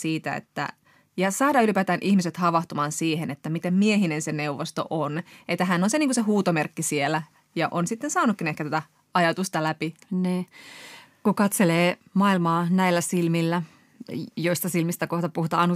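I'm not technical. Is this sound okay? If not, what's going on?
Yes, it sounds fine; I hear no technical problems.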